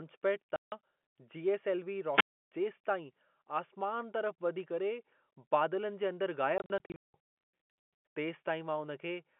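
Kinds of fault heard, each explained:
Packet loss filled with silence: Lost packets were replaced by digital silence, leaving hard-edged holes. At 0.56 s a 160 ms gap appears, and after "बादलनि जे अंदर" from 6.58 to 7.14 s holes totalling 340 ms scatter, the longest 180 ms. Waveform and spectrogram show abrupt blank columns.
Wireless microphone squelch dropout: The FM radio link faded until the receiver's squelch muted the output. Near 2.12 s hiss swells, then about 309 ms of near silence follows before the sound returns. A spectrogram shows broadband noise rising, then an empty stretch ending around 2.51 s.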